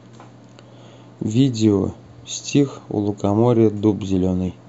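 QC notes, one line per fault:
Nothing stood out on listening to this speech recording.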